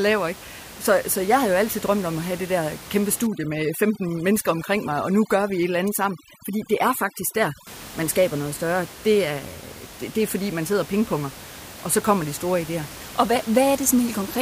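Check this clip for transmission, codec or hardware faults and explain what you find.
One processing fault is audible in the speech. Overdone noise removal runs from 3.27 to 7.67 s, starting after "have det der kæmpe" and ending before "man skaber noget større". The denoiser is set too aggressively, so it drives frequency bands near its noise estimate almost to silence and takes quieter speech detail with them. The gaps become near-silent with twinkling specks. Unlike low-bitrate codec artefacts, the effect follows the noise floor rather than the speech. The room noise, about 17 dB below the speech outside this stretch, is ordinary background in the recording and not a system fault.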